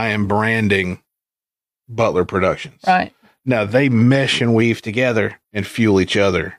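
A drift correction step runs from 4.62 to 5.34 s, where the speech speeds up by about 5.6% and rises nearly a semitone (94 cents) before snapping back, likely from clock-matching software changing the playback rate at once to rebalance its buffer.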